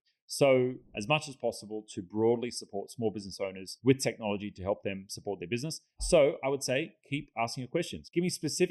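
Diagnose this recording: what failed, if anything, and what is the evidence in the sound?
Channel delay (comb filtering) runs through the whole clip. The sound is hollow and phasey, with a fixed notch near 1.5 kHz and more at even spacing above it. One channel lags by roughly 0.4 ms. The two channels are summed to mono, so shared content cancels at those frequencies. The small lag fits a driver or buffer offset at the mono mixdown.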